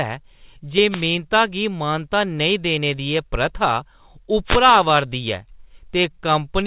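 At 0.89 to 1.06 s and again at 4.45 to 4.61 s, a wireless microphone noise hit breaks through the speech as a brief swish of static lasting about 0.16 s each time. The microphone's FM radio signal faded as reflected paths cancelled, so receiver hiss rose. Unlike a packet-loss gap in the call path, which drops or smears the sound, this adds noise on top. The hiss is also capped at 4 kHz, like everything else here, which fits a G.711 call at 64 kbps.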